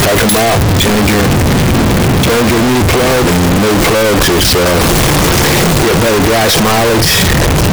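Across the whole clip the audio is very loud and harsh, with the waveform pushed to a nearly square shape at an almost fixed, high level and background noise as loud as the main sound. This is a float read as integer fault, likely from 32-bit float samples being interpreted as 32-bit integers, so sign and exponent bits dominate each value.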